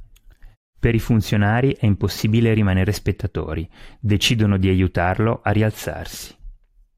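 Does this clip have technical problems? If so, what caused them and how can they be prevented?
No, there are no technical problems to fix here.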